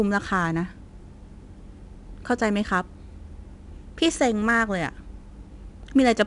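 Right through the speech there's 4-bit ADPCM compression: coarse adaptive steps leave a gritty hiss riding every loud bit, and nothing reaches past 10.6 kHz, which fits a roughly 22 kHz rate.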